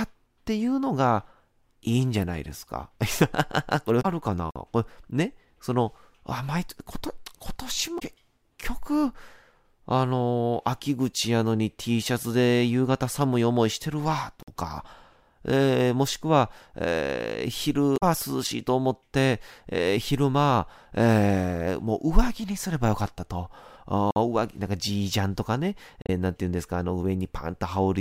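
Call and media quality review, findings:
Blips at 3.99–4.05, 7.96–8.02, 17.93–18.03 and 26.01–26.09 s. Damaged data in the compressed stream: decoder misreads frames, loses sync, resyncs at next header.

50 ms silent holes at 4.51, 14.43 and 24.11 s, roughly 10 s apart. Gap between chunks: playback or storage inserts silence at each chunk join.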